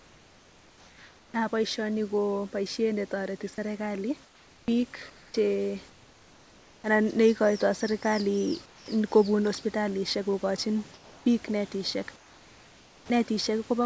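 From 0.0 to 1.34 s the room background gives way to comfort noise in place of the background: a steady, featureless hiss about 4 dB quieter than the real room tone. The likely cause is discontinuous transmission, with the receiver synthesising noise while the sender's voice detector heard nothing. The same swap recurs after "netoreti serikali" from 4.24 to 5.34 s, from 5.90 to 6.84 s just before "anan neikoitoi serikali", from 8.66 to 8.88 s, from 10.94 to 11.26 s, and after "hospitalisyek kokochin bik netisyek" from 12.16 to 13.10 s, with level drops of about 3 to 5 dB. On a spectrogram these gaps appear as smooth, uniform grey bands with none of the room's fine texture, and the waveform floor sits visibly lower.

Two of these patches end with an onset clipped by the voice detector: 30 ms at 1.31 to 1.34 s and 40 ms at 13.06 to 13.10 s. The speech likely resumed before the detector reopened transmission, so its soft start was replaced by noise and the sound begins abruptly. 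In the waveform, the envelope jumps straight from the flat floor to the speech, and the spectrogram shows a hard vertical edge with no gradual rise. The energy above 8 kHz is missing throughout, which fits a wideband call codec.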